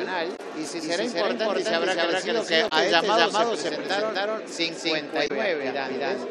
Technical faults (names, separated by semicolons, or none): doubled audio track; damaged data in a compressed stream